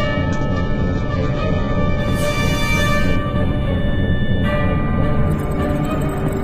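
From 0 to 2.0 s, the adaptive stream starts at a low bitrate. Nothing sounds above 7.9 kHz. Then quality jumps abruptly, with no gap.

From 3.16 to 6.43 s, a channel delay causes comb filtering. One channel lags roughly a tenth of a millisecond. Summing cancels near 5 kHz, sounding hollow.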